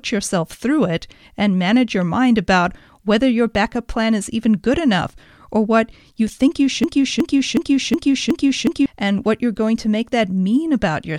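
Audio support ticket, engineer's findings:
Broken-record loop, 6.84–8.86 s: 367 ms speech fragment repeats six times consecutively, replacing the missing audio. Likely player or stream stall re-sending the last held buffer.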